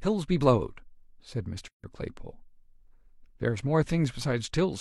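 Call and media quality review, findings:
Gap at a join of encoded pieces, 1.68–1.84 s: separately encoded segments joined untrimmed; encoder delay and frame padding insert 157 ms silence mid-speech.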